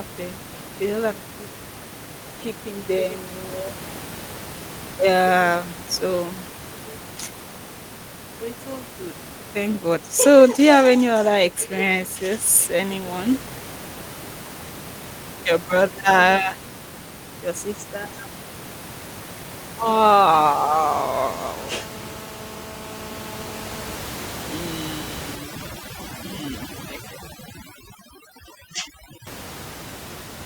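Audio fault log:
25.36–29.27 s, overdone noise removal: noise reduction set too strong cuts any frequency band near its noise estimate. The room noise, about 15 dB below speech, drops and breaks up into twinkling specks, and quiet speech detail goes too.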